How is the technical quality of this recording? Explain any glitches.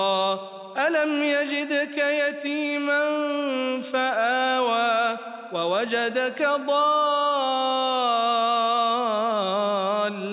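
Nothing stood out as a technical problem on listening.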